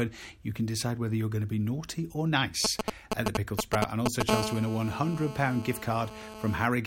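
A speech recording carries two kinds of interference from a nearby 2G handset. From 2.65 to 4.22 s there are GSM signalling bursts: irregular, galloping groups of brief 217 Hz buzzes, somewhat louder than the speech. The radio pulses are rectified in the audio circuitry while the phone exchanges control traffic. Because the groups come and go instead of holding, they differ from a call's continuous tone. From 4.29 to 6.66 s this becomes GSM phone buzz, a steady, raspy 217 Hz buzz about 6 dB below the speech. It is the continuous transmission of an active call rectified the same way. Its 217 Hz fundamental and dense harmonics distinguish it from 50 or 60 Hz mains hum.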